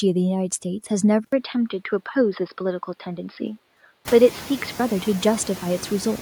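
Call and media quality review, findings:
Noise suppressor artifacts, whole clip: background pulled down about 11 dB between phrases and letting back up under speech. Frame-by-frame band gating in the suppressor, more exposed once room noise climbs about 24 dB near 4 s.

Input switched to a poorer device, 1.24–4.8 s: 80 ms dropout, then dull band-limited sound, new noise floor well below speech, level unchanged. Likely the capture path falling back to a narrower microphone or headset call profile.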